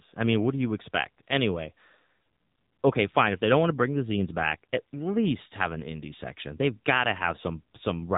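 AMR narrowband mobile codec damage runs through the whole speech clip. The sound carries nothing above 4 kHz, because the codec samples at 8 kHz and rebuilds speech from a vocal tract model driven by a pitch predictor and a few pulses per 5 ms. The coding damage is plainly audible, which fits the 7.4 kbps mode.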